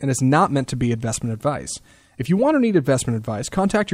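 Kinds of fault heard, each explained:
Nothing here calls for a fault label, since no technical problem stands out anywhere in the recording.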